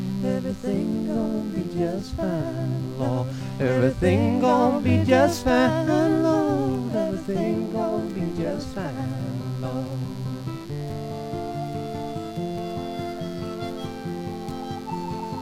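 From the first second to the last there's a mains buzz sitting under everything, and it never lets up. It's tied to a 50 Hz supply: something like a dimmer, a rectifier or an unshielded cable is letting sharp switching spikes through twice per cycle, so you get a whole ladder of 50 Hz harmonics climbing into the kilohertz range. That's why it comes across as a raspy, edgy buzz rather than a soft hum. It sits roughly 25 dB under the programme.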